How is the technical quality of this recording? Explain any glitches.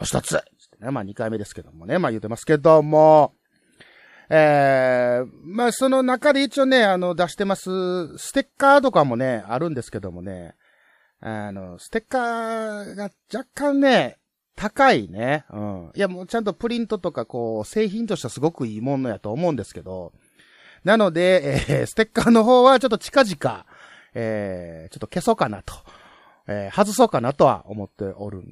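The technical quality of this recording is good, and there are no glitches to explain.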